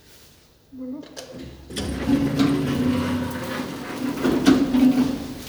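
Nothing here stands out as a technical problem; it's a short stretch of sound, and there's no fault in it to point to.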